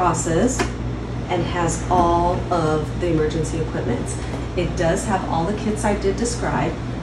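No dropouts, clicks, distortion or level jumps turn up anywhere in the audio.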